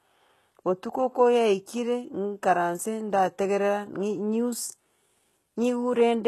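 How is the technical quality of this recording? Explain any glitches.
The recording has plainly audible coding damage throughout. It is likely HE-AAC compression at a very low bitrate, which fits roughly 16 kbps. Only the lower band is coded; the treble is copied upward and coarsely shaped. S sounds turn gritty and lispy, and a spectrogram shows a hard ceiling at 12.3 kHz with smeared, repeated-looking high bands.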